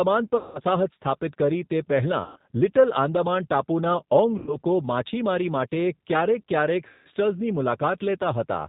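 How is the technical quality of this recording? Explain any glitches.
Quality is limited throughout by low-bitrate speech coding, and four short dropouts interrupt the speech.

G.729 codec, for the whole clip: the speech has a hard ceiling near 4 kHz and a slightly rough, synthetic texture, consistent with 8 kbit/s G.729. The coder does not keep the waveform. It sends a vocal-tract filter, a pitch predictor and a handful of pulses for each 10 ms frame, and the decoder rebuilds speech from them. The result stays intelligible, but the damage is plainly audible.

VoIP packet loss concealed by the speech codec, at 0.37–0.60 s, 2.24–2.37 s, 4.38–4.58 s and 6.87–7.07 s: the missing audio spans about 180, 120, 90 and 180 ms respectively, which fits 30 ms packets. With nothing to decode, the decoder repeats its last pitch and filter at falling gain. Each gap therefore becomes a fading buzzy or coloured smear. 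Because every frame depends on the previous one, the speech stays weak for a short stretch after real packets resume.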